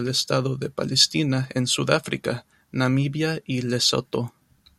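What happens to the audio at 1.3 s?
Nothing goes wrong at 1.3 s: the speech carries on intact through that moment, with no dropout, click, distortion or glitch.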